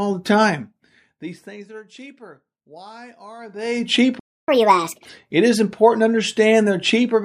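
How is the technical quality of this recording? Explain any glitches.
The recording has a few clear glitches: two stretches of zipper noise, a playback stall, and a sped-up catch-up right after it.

From 0.42 to 1.87 s, zipper noise: the level drops about 25 dB in 1 dB steps, roughly twenty a second, with no smoothing, so each step ticks audibly.

From 3.38 to 3.95 s, zipper noise again as the level comes back up about 25 dB, with faster 1 dB steps, around fifty a second, giving more of a buzzy zip.

From 4.19 to 4.48 s, a playback stall: the audio cuts out for about 0.28 s mid-flow, likely because the player ran dry of data or its thread got blocked.

From 4.48 to 5.05 s, catch-up at higher speed: the player resamples its backlog at 1.5x, so the speech sounds hurried and roughly seven semitones higher until it settles back.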